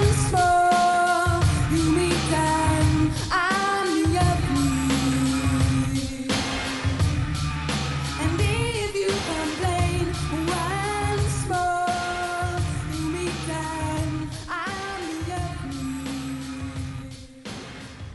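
Nothing in the recording stood out as a technical problem on listening.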